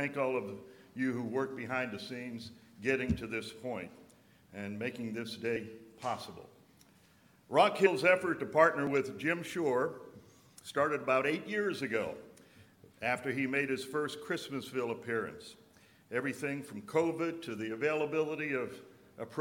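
The audio has two instances of compressed frames skipped, at 7.85–7.87 s and at 8.87 s, where it jumps ahead by roughly 70 ms and 20 ms. Whole coded frames were lost or rejected by the decoder.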